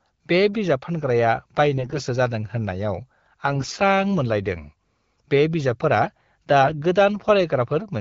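AMR bit errors at 1.78–2.02 s (just after "बे बिजाब फानग्राया"), 3.45–3.76 s and 6.62–6.80 s: a few percent of less-protected bits flip, so speech turns hoarse, scratchy and gargly.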